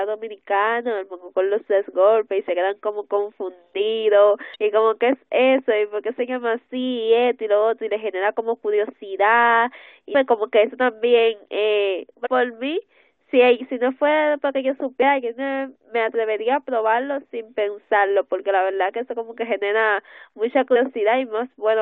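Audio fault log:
4.54–4.56 s, 10.14 s, 12.23–12.27 s, 15.01 s, 20.72–20.77 s: damaged data in a compressed stream. Corrupt frames make the decoder lose sync and resync, causing brief chirps, squawks, clicks or short holes in the speech.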